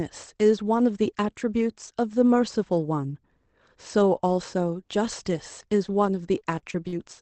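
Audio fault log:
4.94–6.93 s, scattered short gaps: about seven brief dropouts across this stretch, the longest around 40 ms, were patched by extending the preceding sound, so the speech stays clear but picks up small ticks, smears and hiccups where each hole was filled.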